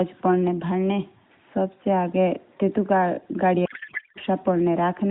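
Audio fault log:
3.66–4.18 s, codec payload misread: for about half a second the speech is replaced by garbled noise and warble that barely tracks it. The framing points to octet-aligned AMR being parsed as bandwidth-efficient, so the decoder pulls its parameters from shifted bit positions and synthesises nonsense from frames that still look valid. Around it, the AMR narrowband mobile codec's light band-limited colouring is audible, which fits the 12.2 kbps mode.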